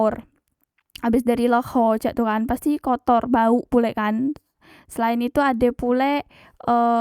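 No technical faults can be heard in this speech recording.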